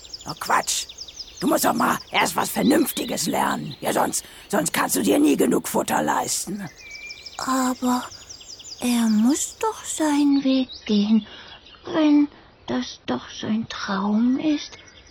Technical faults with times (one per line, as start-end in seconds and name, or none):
10.29-15.10 adaptive stream at a lower bitrate